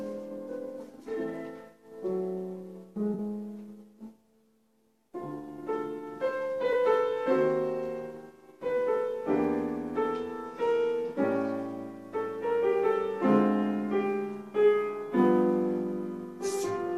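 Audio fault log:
3.14–3.20 s and 6.72–6.76 s: AAC frame loss with concealment. Two brief smeared, noisy patches, about 43 ms and 21 ms long, which fit two lost frames and then one. The decoder filled each gap from the last good spectrum instead of dropping to silence.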